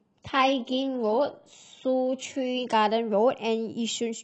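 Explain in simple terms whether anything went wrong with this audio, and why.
Adaptive stream starting at a low bitrate, from 0 to 2.74 s: to begin playing quickly, the player first fetched a rough, heavily squeezed version of the speech, so it sounds thin and artificial. It then switched to a clearer version without any gap.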